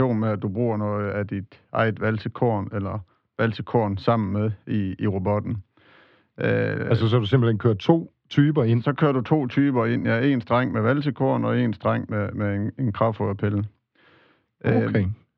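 Speech recording with no technical faults to report.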